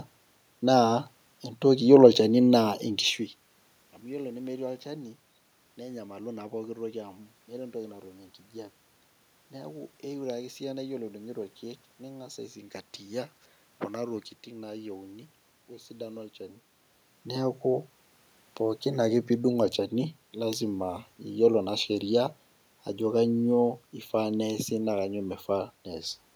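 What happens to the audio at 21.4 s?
Nothing goes wrong at 21.4 s: the speech carries on intact, with no dropout, glitch or distortion at that point.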